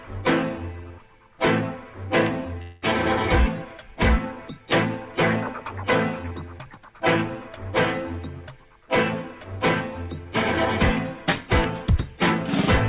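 At 2.62 s the sound breaks into a smeared buzz that fades over about 0.2 s, ending by 2.84 s, and it picks up again without that stretch. That's a long network dropout, most likely, with the receiver stretching the last bit of audio to cover the gap. Everything sits below 4 kHz, as expected from a G.711 A-law call path.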